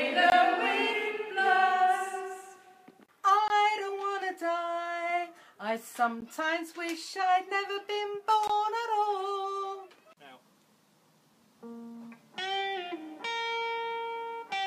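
At 0.30–0.32 s, 3.48–3.50 s, 6.21 s and 8.48–8.50 s the sound drops out in a block of digital silence, with gaps of 20 ms, except about 15 ms at 6.21 s. Samples are replaced by zeros, the pattern left when an output buffer goes unfilled in time. The signal stops and restarts without any fade, and each gap is heard as a sharp tick or tiny hole.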